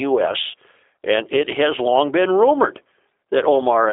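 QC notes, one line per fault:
Throughout: G.729 codec, G.729A variant. The speech is resynthesised from a vocal tract filter, pitch predictor and sparse pulses, so it sounds plainly rough and synthetic. The band runs from 300 Hz to 3.7 kHz, with nothing above 3.8 kHz, which fits an 8 kbit/s VoIP path.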